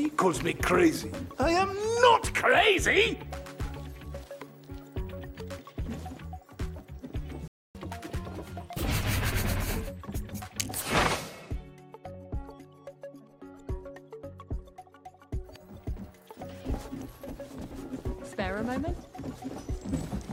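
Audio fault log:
7.48–7.75 s, playback stall: the player most likely ran short of buffered data or had its output thread held up, so nothing reached the output for about 270 ms. The sound cuts off abruptly mid-flow and leaves a clear gap of silence before it resumes.
7.75–8.83 s, catch-up at higher speed: right after the gap the player works through its backlog by resampling, running at 1.25 times normal speed for just over a second to recover the lost time. Since resampling raises speed and pitch together, everything sounds hurried and shifted up by roughly four semitones. At 8.83 s the rate drops back, and pitch and pace return to normal together.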